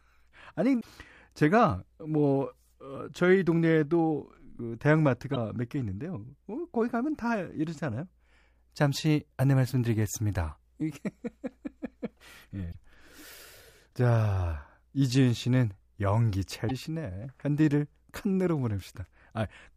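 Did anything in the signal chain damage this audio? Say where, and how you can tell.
Yes: short glitches at 0.77–0.85, 5.32–5.37, 12.68–12.75 and 16.65–16.71 s show damaged data in a compressed stream. The decoder misreads corrupted frames, then resyncs.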